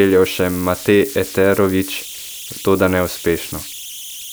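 Converter idle tones run throughout the speech, a whistle near 3 kHz heard in the pauses and a grainy layer under quiet passages, sitting about 16 dB below the signal. An undithered delta-sigma converter settles into repeating bit patterns at low levels, and those patterns produce the tone.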